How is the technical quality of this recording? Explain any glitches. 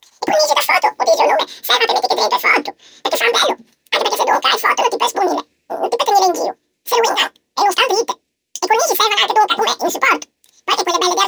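Poor: the speech is audibly wrong for its whole length because it was read two samples at a time, so it plays at double speed. Each pair of samples was taken as one frame, which doubles the speed and lifts pitch an octave. It sounds chipmunk-like. On a spectrogram, the harmonics sit twice as high.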